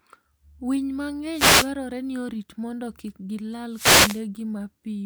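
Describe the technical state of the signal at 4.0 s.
At 4.0 s the speech has a wireless microphone noise hit that lasts from 3.71 to 4.23 s, starting just after "orit mondo kik gilal". The FM radio link fades as reflected paths cancel the carrier, so the receiver's own noise climbs, heard as a short swish of static. On a spectrogram this shows as a broadband haze across the whole band. The waveform shows a fuzzy noise floor over the speech.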